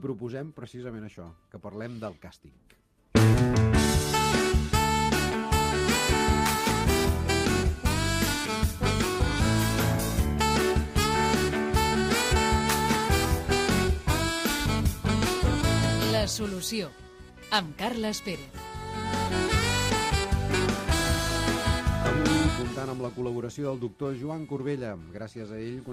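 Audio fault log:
No technical faults can be heard anywhere in this audio. Nothing in the sound calls for a time, a value or a cause to be noted.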